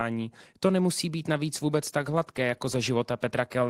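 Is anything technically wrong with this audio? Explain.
Yes, there is one fault. A call bitrate drop runs from 1.48 s to the end of the clip at 3.69 s. The call's bandwidth estimate fell, so the encoder was told to spend far fewer bits, cutting from 32 kbps to 18 kbps and holding the lowest rate for about 1.55 s. The coarser coding makes the speech in that stretch sound rougher or watery compared with the first part.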